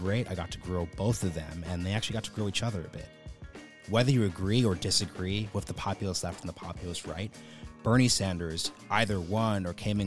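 No technical faults can be heard anywhere in the recording.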